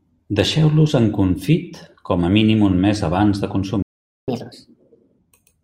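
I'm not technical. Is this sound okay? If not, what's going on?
No. A playback stall hits at 3.82 s: the speech cuts out and there is silence for about 0.45 s until 4.28 s. The player most likely ran short of audio data or was briefly held up, so it had nothing to play until it recovered.

Catch-up at higher speed follows from 4.28 to 5.19 s. The player rushes through the speech it fell behind on at 1.5 times normal speed, so the voice sounds hurried and roughly seven semitones higher, then returns to normal.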